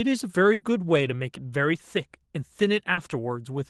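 At 0.53 to 0.63 s the speech hits a burst of packet loss. About 80 ms of audio never arrived, so the receiver stretched the last sound and faded it, giving a held buzz or hiss. The speech then jumps ahead with material missing. On a spectrogram the preceding harmonics run on flat and dim, followed by an abrupt change.

At 2.93 to 2.99 s a short concealed packet loss fills roughly 40 ms with a continuation of the previous sound before blending back, heard as a quick smear or wobble. The waveform shows a brief, oddly regular patch, and the spectrogram a blurred strip. Throughout, the Opus call path limits the top end, with energy stopping near 12 kHz.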